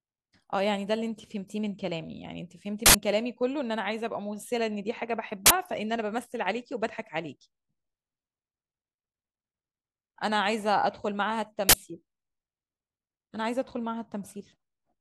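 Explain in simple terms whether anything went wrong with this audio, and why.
Yes, three harsh bursts of digital noise cut into the speech at 2.86, 5.46 and 11.69 seconds. That's an uninitialised buffer: blocks got played before any audio was written into them, so leftover memory came out as noise. The first lasts about 85 ms, the others about 43 ms, fitting 4096- and 2048-sample blocks.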